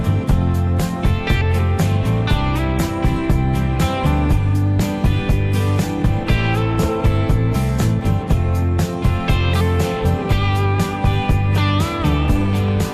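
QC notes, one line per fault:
Throughout, likely MP2 compression: plainly dull and gurgling, as starved upper sub-bands switch off and the rest are coarsely quantised, which fits about 80 kbps.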